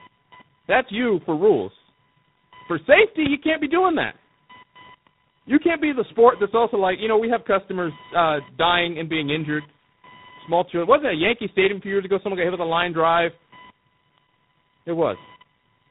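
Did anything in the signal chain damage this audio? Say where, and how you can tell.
Yes. There is a fault in the analogue wiring. A faint buzz runs through the whole clip, pulsing at around 1 kHz, roughly 30 dB below the speech. This is computer activity noise: processor and graphics load shift the shared ground, so the buzz follows the machine, not the talker.

There is also damage at the codec stage, across the network path. Nothing reaches above 3.8 kHz, and the speech sounds rough, muffled and warbly throughout. That points to tandem speech coding: two low-rate speech coders in a row, plausibly G.729A then G.726, with a G.711 link between them. Each coder re-encodes the previous one's errors.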